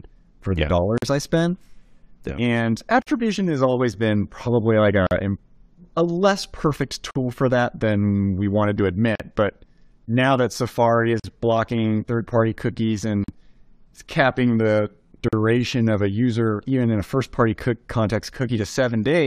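Gaps at joins of encoded pieces cut the speech at 0.98 s (after "for the yeah"), 3.02, 5.07, 7.11, 9.15, 11.20, 13.24 and 15.28 s. Each is a 43 to 45 ms gap, repeating every 2 s. Separately encoded pieces were joined untrimmed, so each encoder's start delay and end padding remain. The result is a brief dropout with smeared edges, and the speech resumes where it stopped.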